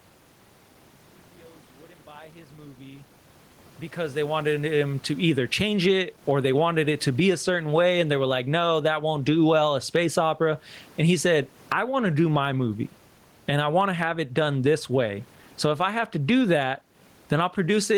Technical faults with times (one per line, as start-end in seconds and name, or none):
0.00-17.98 gain pumping